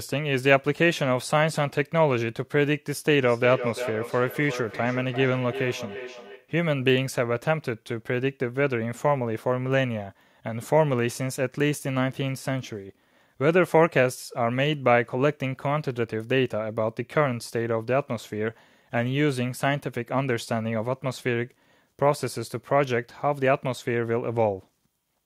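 From 3.12 s to 6.53 s the speech suffers feedback echo between two devices. A second device in the same room plays the call back, and this microphone picks it up again, which its echo canceller cannot remove because the sound did not come from its own loudspeaker. Each stretch of speech returns at a steady interval of roughly 400 ms, peaking at about 10 dB below the speech and sounding thinner and more ringing than the original. That fixed, distinct repeat sets it apart from room reverberation, which smears into a continuous tail.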